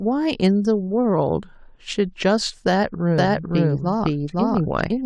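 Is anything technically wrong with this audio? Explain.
Yes. A doubled audio track appears from 3.18 s to the end. A second copy of the speech, likely captured again by a slower path, sits about half a second behind at roughly equal level. The copy cuts in abruptly, with no decay or room colour, so everything overlaps with a dry repeat.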